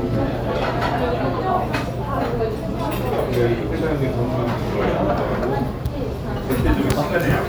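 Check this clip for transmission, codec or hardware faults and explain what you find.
No transmission, codec or hardware faults can be heard; there are no breaks, level jumps or added artefacts.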